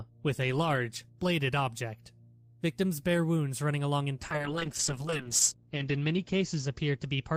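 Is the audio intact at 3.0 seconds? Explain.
Yes, the audio is intact at 3.0 seconds, with no dropout, click, distortion or other fault audible at that point.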